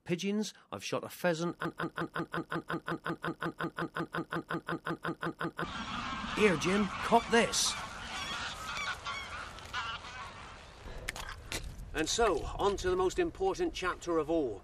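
From 1.65 s to 5.64 s a broken-record loop takes over: a 0.18 s fragment repeats exactly, back to back, 22 times, producing a rapid mechanical stutter. A stalled player, encoder or stream likely kept resending its last fragment, so the intervening audio is lost.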